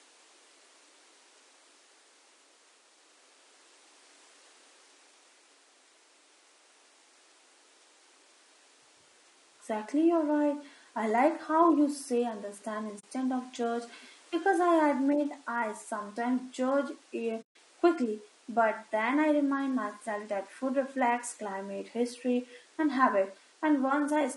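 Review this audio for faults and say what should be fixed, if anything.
Low-delay AAC compression runs through the whole speech clip. The voice sounds rough and grainy, with noise filling the gaps between pitch harmonics. This likely comes from AAC-ELD, whose short frames resolve harmonics poorly and spend bits inefficiently. The strength of the damage fits a bitrate around 32 kbps. To prevent it, raise the bitrate or switch to a codec mode with longer frames when low delay isn't essential.

AAC frame loss with muting occurs twice. The first is at 12.99 to 13.04 s, between "how you say understand" and "of judge because I". The second is at 17.41 to 17.56 s, just before "quickly but then I". The decoder zeroed the missing frames, so the sound fades out and back in with soft edges, leaving holes of 40 ms and 140 ms. These fit two and seven lost frames. To prevent it, add forward error correction or packet-loss concealment that fills gaps instead of muting them.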